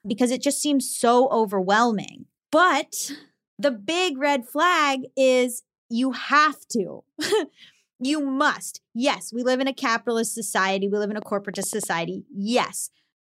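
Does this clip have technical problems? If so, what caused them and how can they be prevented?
Yes. A train of clicks runs from 11.22 to 11.84 s, just after "live in a": about five similar pops at an irregular 6.6 per second, peaking roughly 5 dB above the speech, likely from interference or a faulty connection or power supply. Shielded cabling and a stable interface prevent it.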